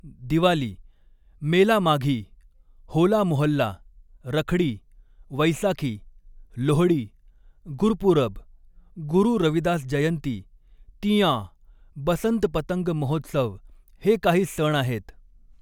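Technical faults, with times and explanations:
No technical faults are present.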